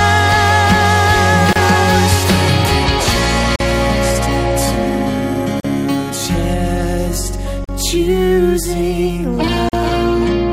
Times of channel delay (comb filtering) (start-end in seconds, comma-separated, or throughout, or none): none